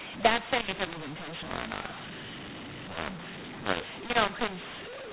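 From start to end the speech suffers a mu-law and A-law mix-up: samples coded with the mu-law curve are expanded with the A-law curve, so levels are remapped wrongly. The speech sounds harsh and distorted, and the pauses fill with noise, within a telephone band topping out near 4 kHz.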